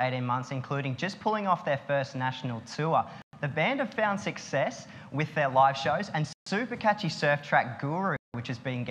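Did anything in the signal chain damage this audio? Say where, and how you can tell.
Yes, in two places. First, the playback link. The sound drops to dead silence three times: at 3.22 s for about 111 ms, at 6.33 s for about 136 ms, and at 8.17 s for about 174 ms. Each time it resumes cleanly, with no fade. That pattern is most likely a Bluetooth stall: interference held up packets on the wireless hop, the headphones' buffer ran empty, and playback waited for the resends before carrying on.

Second, a digital data path, likely at or near the converter. From 6.99 s to 7.51 s there's a steady fizzy crackle riding on the sound. The clicks are all the same size, which points to an unreliable data bit: one marginal data line flips its bit in a random share of samples, and each flip adds a fixed-size spike. That's why the crackle sounds even and constant rather than following the level of the audio.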